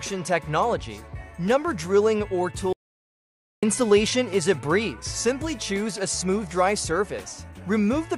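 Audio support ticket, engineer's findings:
Audio dropout to silence, 2.73–3.63 s, about 0.9 s lost. Sound stops mid-flow and resumes abruptly; gap is silent with no room tone. Likely input link loss or stray mute while encoder kept writing. Unlike a gate, no fade or residual noise.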